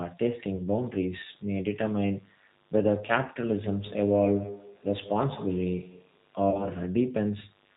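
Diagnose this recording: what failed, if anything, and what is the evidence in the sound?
Analogue wiring let 50 Hz mains interference, with switching spikes twice per cycle, into the signal path. A raspy buzz rich in harmonics runs throughout, about 35 dB below the speech.

The G.729 codec (G.729A at 8 kbit/s) rebuilt the speech from a filter model and sparse pulses. Everything above 4 kHz is gone, and the voice sounds plainly rough and synthetic throughout.

VoIP packet loss concealed by the speech codec occurred twice on the network. At 0.57 to 0.61 s, which fits one lost 10 ms frame, and at 6.51 to 6.66 s, which fits about three lost frames, the decoder extrapolated the voice from its last pitch and filter, lowering the gain frame by frame.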